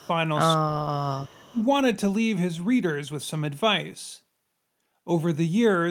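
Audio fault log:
0.00–0.05 s, 0.58–1.02 s, 1.51–1.61 s: speech suppressed in double talk. The speech level dips by roughly 10 dB, then around 30 dB, then around 20 dB, likely because the echo canceller mistook overlapping far-end speech for echo and attenuated both.
0.00–0.07 s, 1.15–1.52 s: echo leak. A faint copy of the speech returns 244 ms late, some 30 to 35 dB below the direct sound. This is likely residual loudspeaker pickup that the far-end echo canceller failed to remove.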